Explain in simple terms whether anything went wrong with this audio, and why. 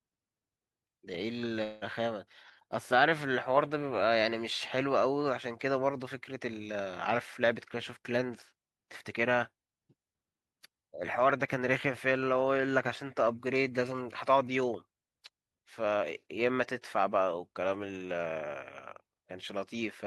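A likely long network dropout stopped audio arriving from 1.63 to 1.84 s. About 0.18 s of speech is lost, covered by a buzzy smear of the previous sound.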